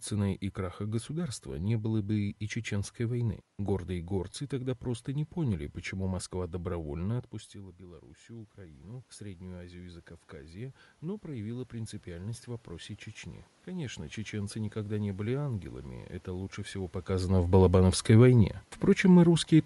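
Throughout the speech, the encoder is likely Bluetooth LC3 compression, running at a rate that fits 48 kbps with 10 ms frames. It discards and noise-fills part of the upper spectrum, so consonants and vowels carry a plainly audible grainy, breathy edge across the whole recording.

At 4.33 s, just before "тогда просто не поняли", one LE Audio frame is lost. The decoder covers the 10 ms gap by repeating the previous spectrum with scrambled phase, which is heard as a brief noisy smear in the speech.

From 7.51 to 12.98 s, the automatic gain rises. The talker drops about 16 dB quieter at the microphone around 7 s, and the gain control climbs by about 10 dB over those five seconds to compensate. Speech and room noise swell up together.

At 13.21 s, another single 10 ms LE Audio frame is lost. The decoder again fills it with a reused, randomised spectrum, leaving a short grainy blur.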